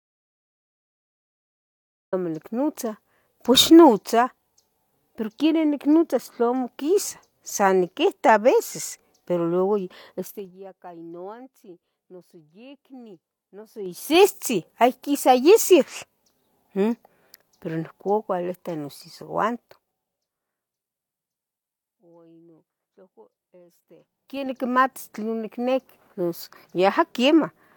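The input was likely lost at the very start, with the recorder writing silence until 2.13 s. The clip therefore opens in dead silence with no room tone, and the speech begins abruptly mid-flow; whatever came before is gone.

Zipper noise follows from level changes applied in unsmoothed 3 dB steps, each step clicking. Fades down by about 20 dB at 10.2–10.56 s and about 25 dB at 19.5–20.5 s, and back up by about 20 dB at 13.62–14.24 s and about 25 dB at 23.86–24.64 s, tick audibly, at roughly 20 steps per second in the first and roughly 10 in the others.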